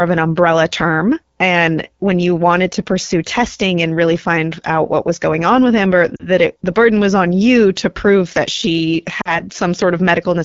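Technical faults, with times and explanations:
throughout: AMR wideband (HD Voice) codec. The speech has a plainly audible rough, raspy grain, with a buzzy edge and a hissy, slightly artificial top end. That roughness points to one of AMR-WB's two lowest modes, fitting 8.85 kbit/s. The coder models speech up to 6.4 kHz as pulses exciting a vocal tract filter, and at so few bits those pulses are placed coarsely. The 6.4 to 7 kHz band is only shaped noise, which adds the hiss.
6.16 to 6.28 s and 9.21 to 9.43 s: lost AMR speech frames. Each time the speech briefly drops to near silence, then returns weak and rough for a moment. The missing audio, consistent with two 20 ms frames per event, failed its checksum after radio errors. The decoder reused the last good pitch and vocal tract settings with falling gain, which in wideband fades the sound fast.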